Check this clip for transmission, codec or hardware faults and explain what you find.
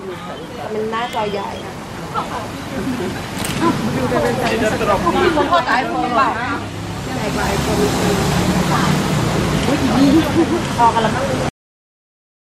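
There is one fault: a cut-off end. At 11.49 s the audio stops mid-sound and drops straight to digital silence with no decay. The final buffers were never written or played, so the remaining second of the clip is empty.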